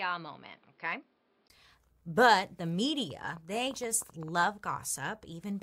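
From the start to 1.5 s, the recording appears to be coming from a poorer input, most likely because the input switched to a poorer device such as a second microphone or a headset's call profile. Nothing above 5.4 kHz gets through, so the speech sounds dull and boxy. It is also somewhat quieter and carries a faint background noise of its own. At 1.5 s a 20 ms gap marks the switch back, and the full, brighter sound returns.

From 3.10 to 4.29 s, something injects a train of clicks, likely interference from nearby equipment or a faulty connection or power supply. About ten similar pulses arrive at roughly 9.3 per second, unevenly spaced. They peak at about the same level as the speech, so they stand out as a ragged ticking or popping laid over the sound.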